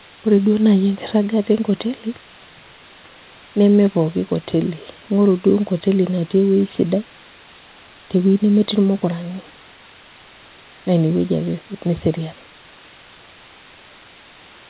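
From start to finish the speech sits on a constant, even hiss, and that's low bit depth with dither. The sound behaves like only about 6 bits are in play, with dither added before rounding, so the quantisation error turns into steady white noise rather than grainy distortion. The hiss sits roughly 20 dB under the speech and never changes character. On top of that, the band stops at 4 kHz, which fits a G.711 call path.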